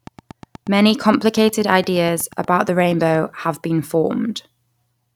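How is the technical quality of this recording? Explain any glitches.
The recording is marred by a train of clicks over the first few seconds of speech. From 0.07 s to 3.16 s, just before "have been", a steady ticking of about 8.5 clicks per second runs under the speech, some thirty near-identical pops as loud as the speech peaks and audible in the gaps too. The likely cause is a repeating pulse from nearby equipment or a faulty connection or power supply. A spectrogram would show evenly spaced thin vertical broadband lines, and a waveform would show regular sharp spikes.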